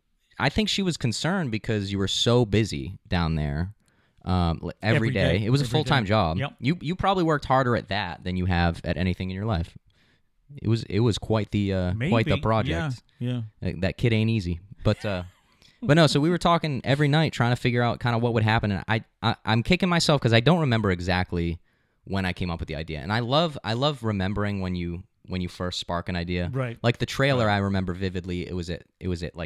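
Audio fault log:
The speech signal stays continuous and even from the first moment to the last, with its level, timing and tone holding steady throughout.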